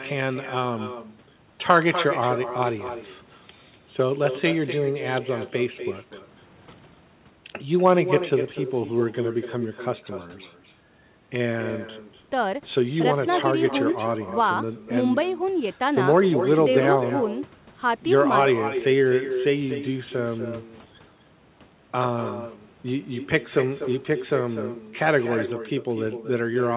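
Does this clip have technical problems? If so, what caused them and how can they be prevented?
Yes, there's an echo with no canceller running the whole way through. The far end's loudspeaker feeds its microphone, so the speech returns roughly a third of a second later, about 9 dB down. Enabling acoustic echo cancellation on the far end, or having that side use headphones, would prevent it.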